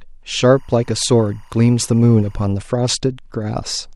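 From 0.44 to 2.44 s there's timecode bleed: 24-frame code leaking in from a neighbouring line, a faint chirpy warble around 1 and 2 kHz sitting well under the speech.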